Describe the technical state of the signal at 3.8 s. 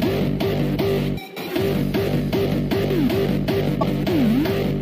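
At 3.80 to 3.83 s the sound skips ahead. This is likely a broken MP3 bit reservoir: after a cut, the next frame's back-reference pulled bytes from an unrelated frame, a gap fitting roughly one 26 ms frame.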